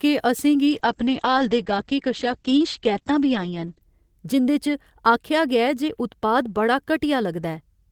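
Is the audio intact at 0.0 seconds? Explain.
Yes, the speech is intact at 0.0 seconds, with no audible fault at that moment.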